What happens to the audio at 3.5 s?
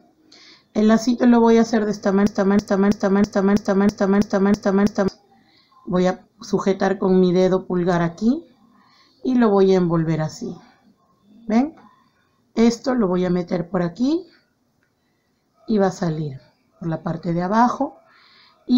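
At 3.5 s the audio is inside a broken-record loop spanning 2.27 to 5.08 s. The playback or stream likely stalled and kept resending its last held fragment, so a 325 ms slice repeats nine times back to back and the intended sound is lost.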